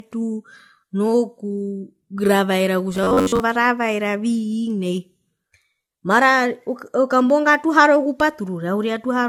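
Across the whole speech clip there is generation loss. The sound has a swirly, hollow smear with blunted consonant attacks, more than a single 64 kbit/s AAC-LC pass would cause. The likely cause is repeated decoding and re-encoding, around four passes, each on a shifted frame grid, so quantisation noise and spectral holes build up. Unlike simple low-bitrate coding, the damage is cumulative smearing, not just a duller top end.

From 2.95 to 3.40 s the speech turns into a rigid metallic buzz pitched at about 93.8 Hz: robotic sound from repeated short buffers. The likely cause is late audio delivery. The player loops the last chunk, roughly 10.7 ms long to match that pitch, and skips most of the real signal in between. Unlike codec warble, the buzz holds one fixed pitch while the speech's rough outline still comes through.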